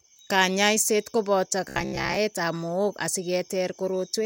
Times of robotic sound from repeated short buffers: 1.68-2.18

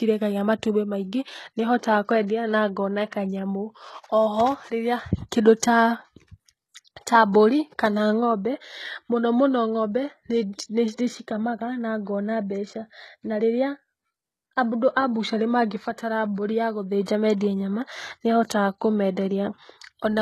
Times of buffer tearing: none

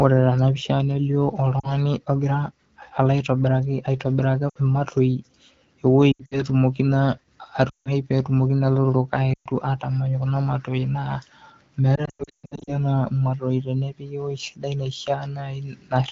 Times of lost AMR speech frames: 1.60-1.74, 4.49-4.57, 6.12-6.43, 7.69-7.91, 9.33-9.47, 11.95-12.74

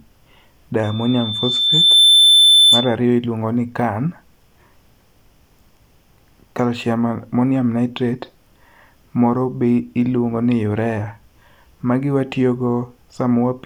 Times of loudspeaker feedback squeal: 0.83-2.97

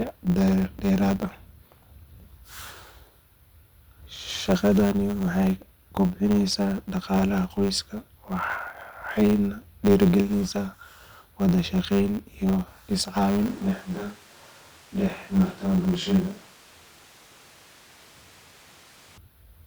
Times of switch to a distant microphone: 13.48-19.18

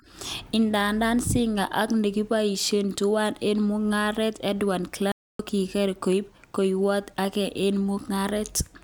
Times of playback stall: 5.12-5.39

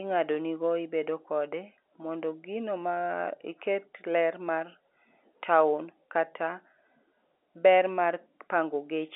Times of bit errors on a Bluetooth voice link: none

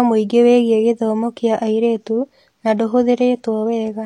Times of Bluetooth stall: none

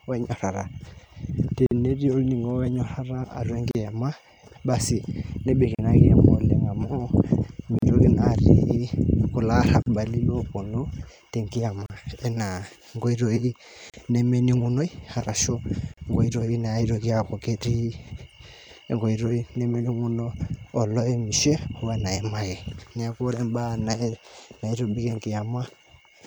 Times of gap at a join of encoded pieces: 1.66-1.71, 3.71-3.75, 5.75-5.79, 7.79-7.82, 9.82-9.86, 11.86-11.90, 13.90-13.94, 15.94-15.97

